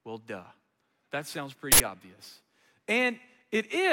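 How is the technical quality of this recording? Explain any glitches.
The recording has one glitch. From 1.72 to 1.80 s an uninitialised buffer was sent to playback before any audio was written into it, so 80 ms of leftover memory was played as samples, producing a sudden, loud burst of harsh digital noise.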